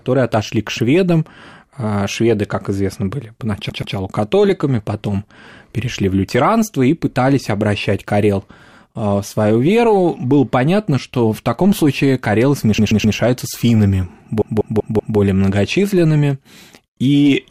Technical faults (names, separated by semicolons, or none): repeated frames